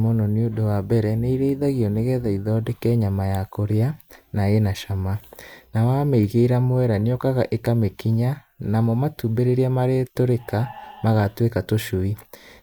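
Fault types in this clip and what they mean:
No technical fault can be heard anywhere in the speech recording, and the signal stays continuous and steady throughout.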